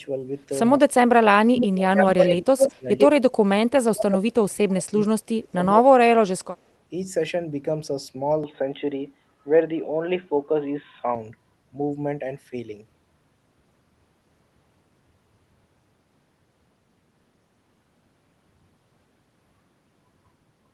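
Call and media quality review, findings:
Speech suppressed in double talk, 0.76–2.88 s, 3.76–5.08 s and 5.41–6.56 s. Talker dips hard while the far side speaks, down by about 30–35 dB at worst, roughly a second or more each time. Likely the echo canceller ducking both sides.

Echo leak, 1.59–3.07 s. Delayed copy of the voice trailing by 98 ms, about as loud as the speech itself. Likely a loudspeaker endpoint whose canceller let the mic pickup through, so it got sent back.

Input switched to a poorer device, 8.44–11.15 s. Sound goes dull, narrower band, level shifts by about 5 dB, no gap at the switch. Likely a handover to a headset call profile or a weaker mic, then back. The Opus call path's coding noise stays in the background throughout.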